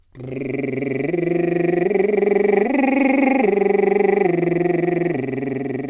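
No technical faults are audible.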